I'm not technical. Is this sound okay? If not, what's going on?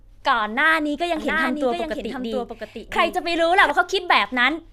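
No. From 1.16 to 3.70 s there's a doubled audio track: a quieter copy of the speech trails about seven-tenths of a second behind, likely from a second, slower recording path. Unlike an echo, it never fades away and cuts in and out abruptly.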